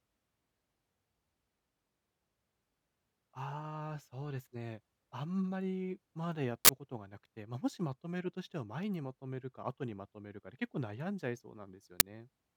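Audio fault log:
6.65–6.69 s and 12.00 s, uninitialised buffer: 40 ms and 10 ms blocks played before being filled, so leftover memory sounds as brief, loud digital noise bursts.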